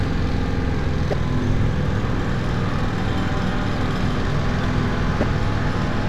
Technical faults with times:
1.10-1.13 damaged data in a compressed stream
5.20-5.23 damaged data in a compressed stream

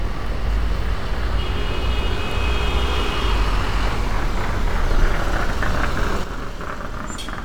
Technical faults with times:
6.24-7.44 sudden gain jump

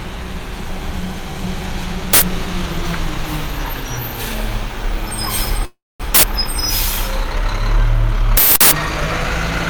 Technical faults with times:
2.13-2.22 uninitialised buffer
5.65-6.02 call audio freeze
6.15-6.23 uninitialised buffer
8.37-8.71 uninitialised buffer

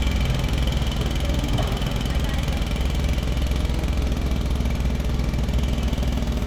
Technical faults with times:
none

